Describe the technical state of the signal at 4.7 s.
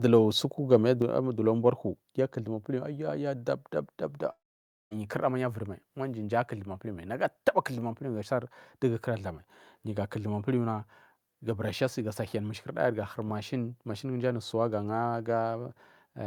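At 4.7 s the signal is inside a long network dropout lasting from 4.31 to 4.93 s, most likely because about 0.6 s of audio never reached the receiver. With nothing new to play, the receiver extended the last sound into a short, fading buzz, then fell to near silence for roughly half a second. The speech picks up again after 4.93 s with the missing stretch simply gone.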